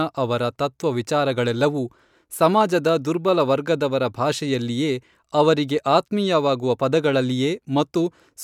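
No technical faults can be heard anywhere in the speech.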